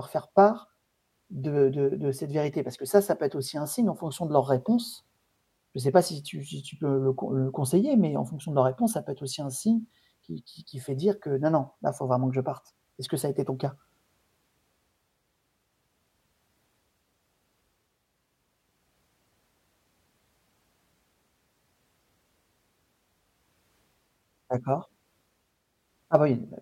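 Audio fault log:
Nothing to log here: this speech recording has no faults anywhere along it.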